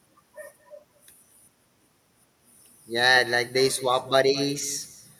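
From start to finish the speech carries an echo with no canceller. Each phrase returns a fifth of a second or so later, about 19 dB below the direct sound, as a fainter, thinner copy trailing behind it. The far end is playing this audio through a loudspeaker, its microphone is picking it back up, and nothing in that path subtracts it, so the signal survives the network round trip and is heard again.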